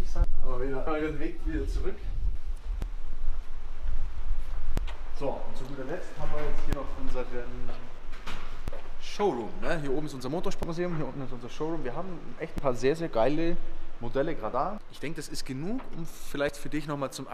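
Audio missing between chunks: nine brief skips in the audio recur about every 2 s, from 0.87 s to 16.49 s. Each drops roughly 50 ms and splices the two sides together. The likely cause is a recorder working in 2-second chunks and losing a piece at each handover.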